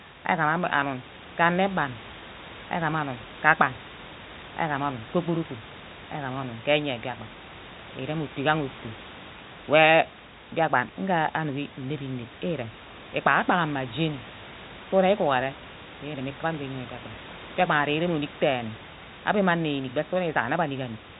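Speech; no technical faults can be heard anywhere here.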